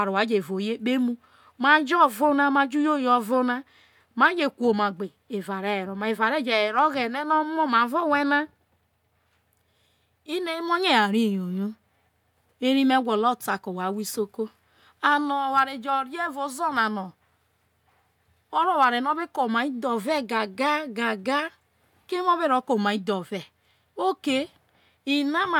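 Listening through the speech recording, nothing stood out as a technical problem at any point.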